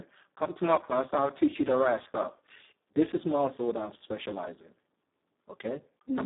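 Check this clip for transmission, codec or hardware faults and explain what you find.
One codec fault affects the entire recording. Speex codec, throughout: too few bits for the excitation leave the speech hoarse, noisy and robotic, held to 200 Hz to 3.7 kHz, consistent with roughly 4 kbps.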